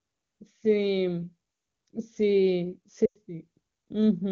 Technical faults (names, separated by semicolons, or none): lost AMR speech frames